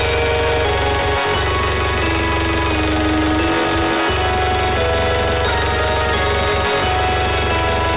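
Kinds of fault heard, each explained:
No dropouts, clicks, clipping, level jumps or timing breaks are audible anywhere in the clip.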